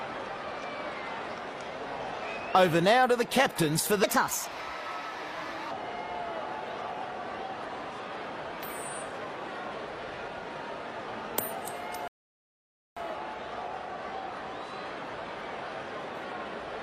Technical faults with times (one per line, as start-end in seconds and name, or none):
4.04-5.71 section at the wrong speed
12.08-12.97 rebuffering stall